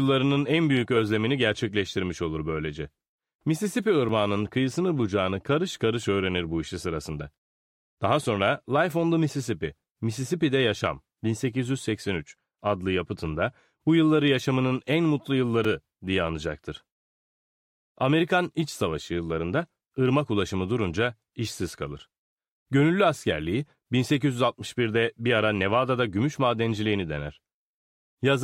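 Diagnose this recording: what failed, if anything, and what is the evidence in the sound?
Two blocks of digital silence, at 4.09 s and 15.64 s, point to a driver or buffer underrun. Each is a hard cut to silence lasting about 2.9 ms, heard as a tick. That length fits one missed 128-sample buffer. The abrupt edges and sudden silence distinguish it from a crackle in the analogue wiring.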